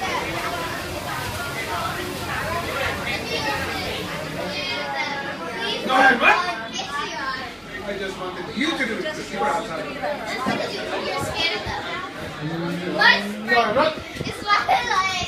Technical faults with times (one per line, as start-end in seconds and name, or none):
none